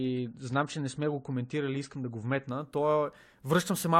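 From the start until 2.5 s the speech plays as an adaptive stream starting at a low bitrate: the player began on a lean version to start quickly, and the thin, swirly sound points to roughly 32 kbit/s AAC. Nothing above 9 kHz survives, so sibilants are dull. At 2.5 s it switches, likely to a 96 kbit/s stream, without any gap. On a spectrogram the energy is flat-topped at 9 kHz, then extends upward abruptly at 2.5 s.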